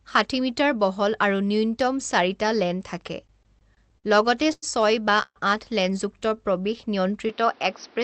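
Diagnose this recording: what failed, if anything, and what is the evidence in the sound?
Repeated stalls (stutter) from 3.27 to 4.06 s, a network and jitter-buffer fault. The speech catches six times in under a second. Each catch holds the last sound briefly, the longest about 58 ms, and together they fill 144 ms, close to a fifth of that span. Nothing is lost. Packets kept arriving behind the playout clock. The buffer ran dry again and again, and the receiver bridged each hole by extending what it had just played.

A short stall from a late packet at 4.53 to 4.64 s, again at the network and jitter buffer. One sound is held for 96 ms. Then the speech resumes exactly where it left off. A single packet missed its deadline. The receiver stretched the last audio until the packet turned up, so playout now runs 96 ms later than before. Nothing was skipped.

A call audio freeze at 5.22 to 5.38 s, at the network stage. 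The last sound carries on and fades. It then drops to about 50 ms of silence before speech returns. The gap totals 133 ms, and no speech is missing. The likely cause is packets held up in transit. The buffer emptied, concealment decayed to nothing, and the stream picked up from its stopping point, leaving a 133 ms delay.

A jitter buffer slow-down at 6.18 to 6.77 s, in call processing. The speech drags at about 89 percent speed. Pitch stays the same, and sounds are drawn out. The receiver was rebuilding its reserve. It repeated single pitch periods and small pieces of pauses, many in a row. This added 69 ms over that stretch without changing the pitch.

Input switched to a poorer device at 7.29 s, lasting to the end of the clip. This is a capture-side change. The sound turns dull and boxy, with a narrower band. Up to then the call path's 8 kHz band applied. A new noise floor appears, roughly 30 dB below the speech. 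The level stays about the same, and there is no silence at the switch. A mid-call change to a narrower-band input, such as a headset call profile, is the likely cause.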